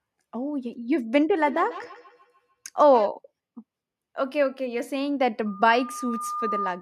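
From 1.47 to 3.11 s there is feedback echo between two devices. A second device in the room replays the call, and this microphone picks it up. The speech returns about every 150 ms, thin and ringing, about 15 dB below the direct voice.

At 5.46 s a loudspeaker feedback squeal begins and runs to the end at 6.81 s. The microphone hears its own loudspeaker, and at 1.2 kHz the loop gain passes one. The tone swells over roughly a second until it matches the speech.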